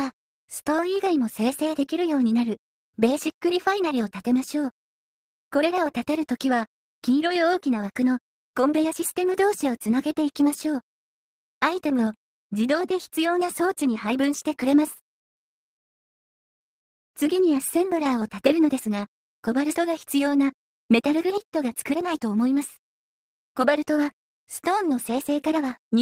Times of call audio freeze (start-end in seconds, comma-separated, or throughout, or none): 15.77-17.16